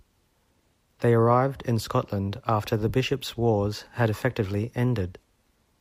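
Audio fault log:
There is no fault in this speech.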